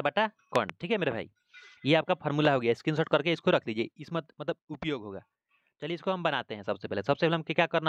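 Three loud pops sit on top of the audio. Between 0.56 and 0.72 s a double pop occurs, and a single one follows from 2.45 to 2.47 s, each peaking roughly 15 dB above the signal. The cause is likely a voltage transient such as static or a switching glitch.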